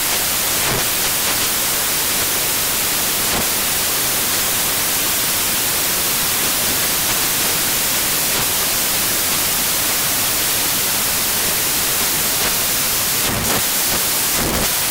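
From start to finish the audio suffers from samples built from the wrong bytes: the reader assembles each value from misaligned or swapped bytes, so fast-changing low bits dominate. The result is loud, harsh noise, close to white on loud passages and unlike added hiss.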